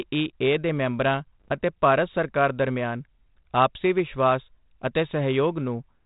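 At 1.42 to 1.53 s, bit errors on the ADPCM link throw the decoder's step size and predictor off, so you get pops and a rough, wobbling burst.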